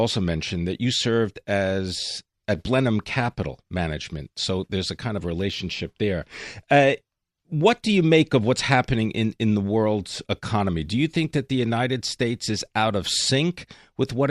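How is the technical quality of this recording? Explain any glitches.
No glitches or technical faults can be heard anywhere in this speech recording.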